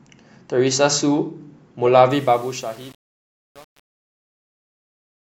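From 2.11 s to the end, the speech fading out turns grainy and gritty as it gets quieter. This is truncation distortion on a fade. The fade-out that begins around 2 s is smooth in shape, but the gain stage rounds each sample to too few bits with no dither, which fits a stage keeping only about 7 bits. The quiet tail collapses into a few coarse square steps.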